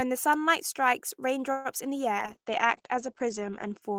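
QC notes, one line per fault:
1.51–1.68 s, call audio freeze: the last sound is extended as a fading buzz for about 130 ms, likely a jitter buffer underrun; the audio then resumes with nothing lost.
2.20–3.88 s, call bitrate drop: encoding falls from 32 to 11 kbps and bandwidth narrows from 20 kHz to 8 kHz, so the speech turns muffled and coarse.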